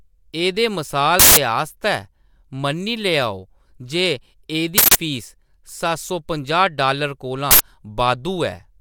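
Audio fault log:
1.20–1.37 s, 4.78–4.95 s and 7.51–7.60 s, uninitialised buffer: three times, a buffer was sent to playback before any audio had been written into it, so whatever leftover memory it held was read out as samples. Each event is heard as a burst of digital noise replacing the speech. The first two last about 170 ms each, which fits an 8192-sample buffer. The third, right after "डालर कोला", lasts about 85 ms, which fits a 4096-sample buffer.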